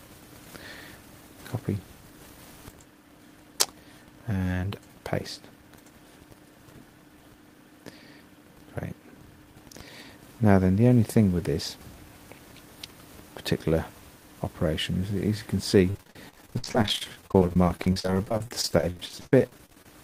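From 15.90 to 19.89 s, repeated packet loss (robotic sound) sets in. Many short holes, the longest 58 ms, are patched by repeating prior sound, unlike a single dropout's one clean silence.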